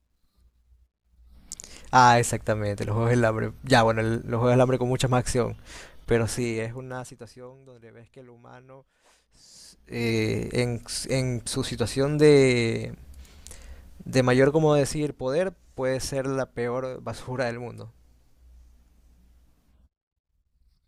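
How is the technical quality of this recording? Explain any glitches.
The recording has audible zipper noise during three level moves. From 6.12 to 7.6 s, 9.46 to 10.1 s and 14.7 to 15.12 s, gain changes of about 25, 25 and 10 dB are applied in unsmoothed 2 dB steps, so each step clicks, producing a ticking zip over the speech.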